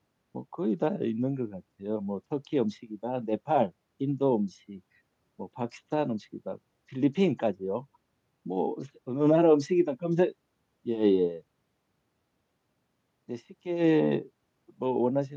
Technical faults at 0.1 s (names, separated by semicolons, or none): none